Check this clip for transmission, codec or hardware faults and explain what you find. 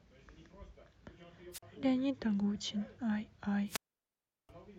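Two wireless microphone squelch dropouts interrupt the speech, at 1.52 to 1.63 s (a 44 ms mute) and 3.66 to 4.51 s (a 0.72 s mute). The radio link fades, so hiss rises briefly before the receiver's squelch gates the output off. On a spectrogram, broadband noise smears upward, then a blank gap appears. The waveform flatlines.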